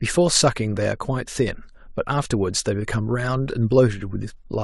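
No technical faults are audible.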